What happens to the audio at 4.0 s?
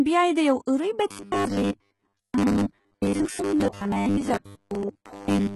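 At 4.0 s the speech is inside a stretch of robotic sound from repeated short buffers that runs from 1.11 s to the end. It takes the form of a rigid, metallic buzz at 100 Hz that tracks the original only loosely. The likely cause is new audio arriving too seldom, so playback keeps replaying the most recent fragment while real audio is dropped. A 100 Hz buzz corresponds to a repeated segment of about 10 ms, and most of the stretch is refilled material rather than fresh signal.

The moment also carries heavy damage consistent with HE-AAC compression, likely at a low bitrate around 16 kbps. There is nothing above 11.8 kHz. The treble that remains sounds synthesized rather than original: upper bands appear copied from lower ones and shaped coarsely, so harmonics don't line up across the crossover, and s sounds come out gritty or metallic.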